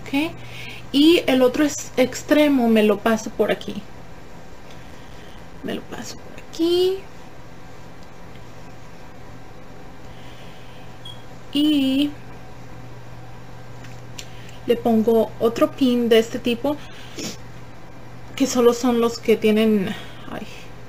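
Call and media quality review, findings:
Processor overload crackle, 4.87–5.61 s. Gritty burst of tiny dropouts riding on the audio, then clean once the load clears. The host CPU is missing its audio deadlines back to back, leaving short silent gaps with hard edges. The spacing fits buffers of roughly 5 ms, with about 20 misses across the burst. Worth checking what spiked the load right there.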